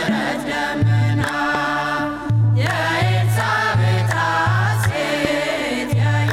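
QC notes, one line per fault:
1.55–1.57 s and 5.25–5.27 s, loud pop: two sharp single pops, each roughly 10 dB above the sound, which carries on underneath; likely a brief voltage pulse from a plug, switch or static.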